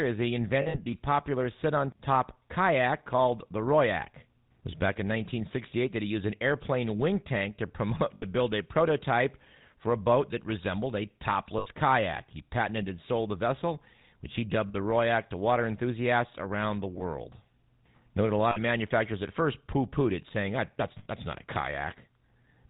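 Throughout the speech, the GSM full-rate codec gives a buzzy, gravelly roughness and a dull top end with nothing above 4 kHz. The codec models the vocal tract and drives it with a coarse pulse excitation, which fits the 13 kbps full-rate coder. Unlike a lossy music codec's swirly, watery artefacts, this roughness is strongest on higher-pitched sounds.

Lost GSM frames first appear between 0.62 and 0.86 s. They are scattered across about 240 ms, with the longest gap roughly 70 ms. Shorter losses follow at 8.14–8.25 s (80 ms), 11.58–11.67 s (80 ms), 14.68–14.75 s (60 ms), 16.98–17.02 s (20 ms), 18.50–18.58 s (60 ms) and 20.98–21.08 s (80 ms). Each gap is filled by repeating the settings of the last good frame, so the sound hangs as a brief metallic ring rather than dropping to a click or silence as plain packet loss would.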